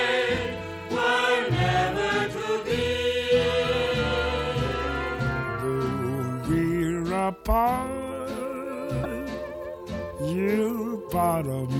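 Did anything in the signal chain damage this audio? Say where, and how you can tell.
Yes. The damage is at the codec stage, where data in a compressed stream was corrupted. From 9.00 to 9.06 s, a span of about 60 ms, the sound is briefly disrupted. That is what a decoder produces when it meets frames whose bytes are wrong: it misreads them or rejects them, loses sync, and has to hunt for the next valid frame header before normal decoding resumes.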